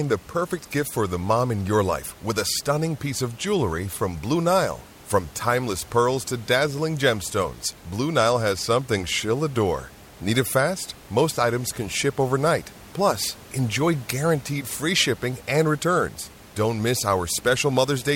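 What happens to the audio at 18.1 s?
Nothing goes wrong at 18.1 s: the audio is intact there, with only the faint room noise sitting about 23 dB beneath the speech.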